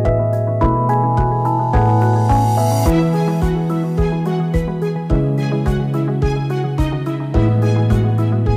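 Throughout, the signal runs about 6 dB hotter than one stage can pass, so its peaks are cut flat: hard clipping. Under one percent of samples hit that ceiling, and the flattened tops add high harmonics, heard as brief crackle on the loudest peaks.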